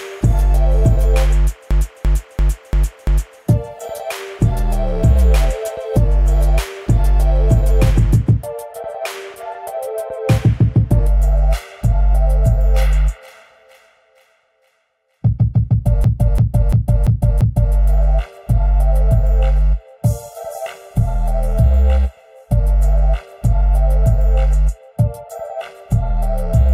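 A system hang loop hits at 1.71–3.41 s and again at 16.04–17.75 s: a 341 ms fragment, consistent with a 16384-sample buffer, repeats five times at 2.93 Hz, giving a skipping-record effect. From 11.07 s onward, channel delay (comb filtering) from one channel lagging by about 1.5 ms before mono summing cuts notches from around 300 Hz up, making the audio hollow and phasey.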